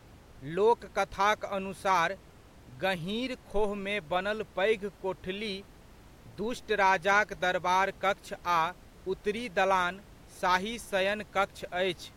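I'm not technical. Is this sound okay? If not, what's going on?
Yes, nothing stood out when I listened, and the faint background noise of the room sits well beneath the speech as a normal part of the recording.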